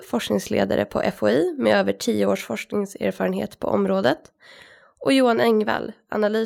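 Microphone overload at 4.06 to 4.09 s gives a brief, harsh crackle on a loud peak of the speech. The likely cause is input gain set too high, driving the peak about 2 dB past the converter's ceiling and flattening its top across a small fraction of samples.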